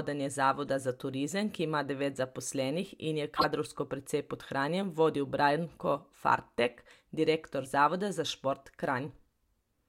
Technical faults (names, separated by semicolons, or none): compressed frames skipped; corrupt frame decoded